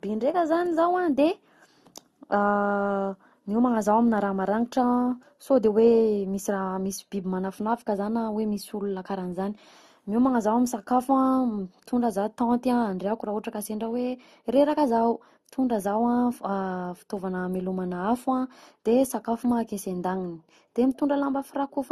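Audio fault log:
throughout: transcoding between lossy codecs. Nothing above 12.2 kHz, and smeared, warbly artefacts pile up. It's likely low-rate Opus re-encoded as AAC-LC, each pass adding damage.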